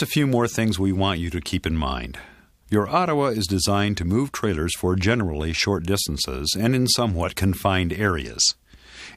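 No technical faults can be heard anywhere in this audio.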